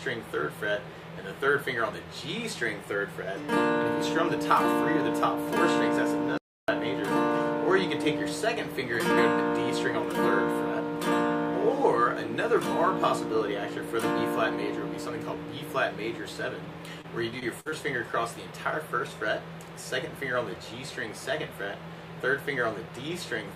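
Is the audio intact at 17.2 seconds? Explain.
No. From 17.01 to 17.74 s there is repeated packet loss, giving a robotic sound. Five short dropouts, the longest 54 ms, are each patched by extending the preceding sound, so about 17% of the span is filled-in audio, producing choppy stutter with pieces missing.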